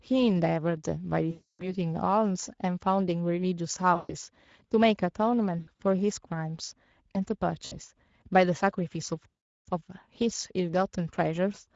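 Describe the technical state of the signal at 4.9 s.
At 4.9 s the speech sounds hoarse and noisy, as it does throughout the clip. This is Speex codec damage: the CELP coder has too few bits for the excitation, which fits a setting around 16.8 kbps.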